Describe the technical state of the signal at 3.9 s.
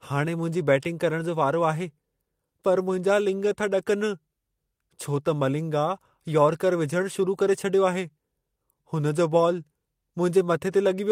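At 3.9 s the speech signal is intact, with no dropout, click, distortion or other fault.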